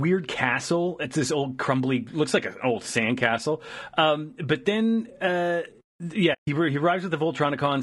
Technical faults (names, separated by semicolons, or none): low-delay AAC compression; AAC frame loss with muting